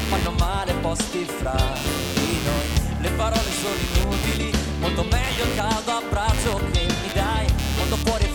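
Throughout, computer activity noise is present: load swings in the processor, graphics card or mouse shift the audio's shared ground, pulsing around a hundred times a second, about 10 dB below the sound. Unlike mains hum, it jumps and drops with computer activity, not the audio.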